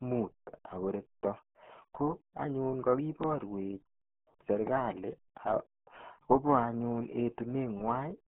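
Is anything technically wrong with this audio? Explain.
Yes. For the whole clip, the speech carries the sound of the RealAudio 14.4 codec, a very low-rate speech coder from the dial-up era. Squeezing the signal into roughly 8 kbit/s leaves a telephone-like band of about 150 Hz to 3.6 kHz, with nothing above 3.9 kHz, and the coding damage is heavy. Speech comes out muffled and gargly. On a spectrogram the energy stops at a hard ceiling near 3.9 kHz, and the harmonics below it look smeared and blotchy.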